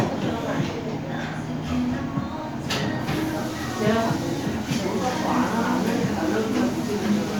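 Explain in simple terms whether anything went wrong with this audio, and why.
Listening closely, nothing in this audio stood out as having gone wrong.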